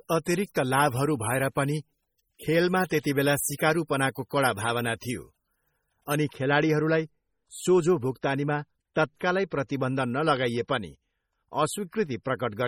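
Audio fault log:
Throughout, MP3 compression: heavy watery, swirling artefacts as weak frequency lines drop in and out between frames, likely from MP3 encoding at a low bitrate near 32 kbps.
0.0 to 6.16 s, pre-emphasis left on: treble stands about 10 dB high at 10 kHz against 1 kHz, a fixed tilt fitting a 50 µs FM curve. It ends before "अनि खेलाडीहरूलाई".
2.39 s and 4.15 s, pre-echo: a brief hiss of 14 ms and 11 ms respectively leads each attack, as codec noise spreads backward through the block, unlike a steady tonal brightness.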